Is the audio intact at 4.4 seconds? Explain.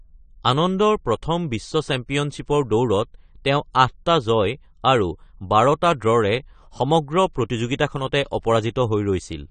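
No. At 4.4 seconds the speech carries the same damage that runs through the whole clip: nothing sounds above about 9 kHz, and what remains is dull and smeared with a fizzy, warbling edge on sibilants. The likely cause is AAC compression, which fits AAC-LC at around 32 kbps, where the encoder discards detail the hearing model deems masked. A simple low-pass filter would only dull the top without adding that fizz.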